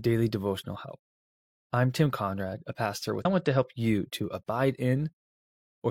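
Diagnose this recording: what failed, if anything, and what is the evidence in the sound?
A stream segment skipped at about 3.21 s: the speech jumps abruptly forward with a brief blip lasting to 3.26 s, so the flow breaks without any pause or fade. This is likely a streaming-playback failure, where one segment failed to load and the player continued with the next.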